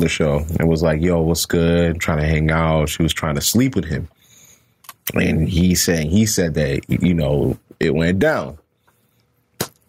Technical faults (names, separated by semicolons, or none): gain pumping